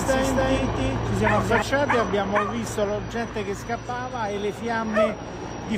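Right from the start until 1.62 s there's a doubled audio track: a second, full-band copy trails the original by roughly 300 ms at about the same level, with no decay. The likely cause is a slower capture path or out-of-step edit; the copy then cuts off abruptly.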